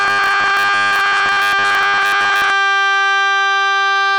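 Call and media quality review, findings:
Robotic sound from repeated short buffers, 0.01 to 2.5 s. Music collapses into a rigid metallic buzz at 100 Hz, which fits a 10 ms slice being looped. Likely playout buffer underrun: input arriving too seldom, most of the real audio skipped while the last slice repeats. Distinct from packet-loss concealment or dropouts: the tone stays fixed at 100 Hz regardless of the music's own pitch.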